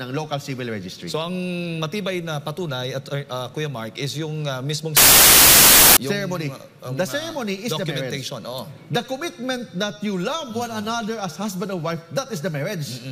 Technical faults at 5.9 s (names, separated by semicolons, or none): wrong sample width